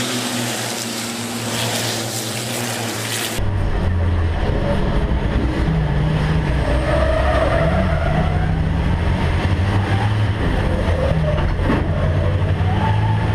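No technical fault can be heard anywhere in the audio. Nothing in it calls for a fix or further attention.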